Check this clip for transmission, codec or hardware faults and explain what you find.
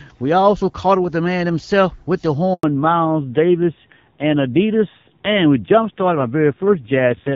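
Two faults turn up, both around the same moment, and they look like a call being handed between networks.

First there's a handover gap from 2.53 to 2.63 s, so about 100 ms of nothing. While the phone switched links, no speech frames came through, and the decoder had nothing to play. The speech dies away quickly and sits in silence until the new link picks up. Whatever was said in that tenth of a second is gone.

Right after, from 2.63 s to the end, there's a fallback to narrowband. Before the switch the speech has the clean, airy quality you'd expect from HD Voice, sounding like AMR-WB at around 12.65 kbit/s with only light coding damage. After it, nothing survives above 4 kHz, so the sibilants and breathiness drop away and the speech goes dull and boxy. There's also a rough, buzzy edge that points to a low-rate narrowband AMR mode, something like 5.9 kbit/s.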